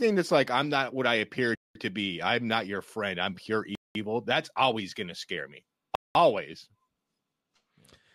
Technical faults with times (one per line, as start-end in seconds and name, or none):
1.55-1.75 gap between chunks
3.75-3.95 gap between chunks
5.95-6.15 gap between chunks